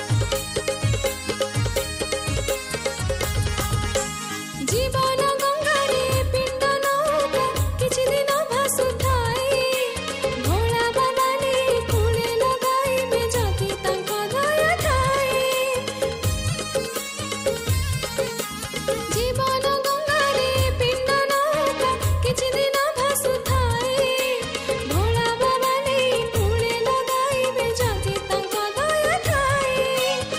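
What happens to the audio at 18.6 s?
Nothing goes wrong at 18.6 s; the audio plays through that moment intact, with no fault of any kind.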